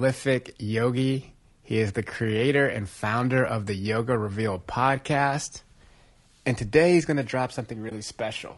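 From the start, the speech has a rough, grainy texture: there's a fizzy noise sitting between the harmonics, and the top end sounds thin and a bit synthetic rather than airy. That's the classic signature of low-delay AAC compression, likely AAC-ELD at a low bitrate in the region of 32 kbps. Its short frames can't pin down pitch harmonics cleanly, so the codec smears noise into the gaps and fakes the upper band.

Near the very end, from about 7.89 to 7.92 s, the sound briefly dips out and comes back. That's AAC frame loss with muting: the decoder had nothing for that stretch and zeroed the spectrum, and the overlapping windows fade it down and back up around the gap instead of chopping it. You get a brief dip, and its length fits a single lost frame of about 20 ms.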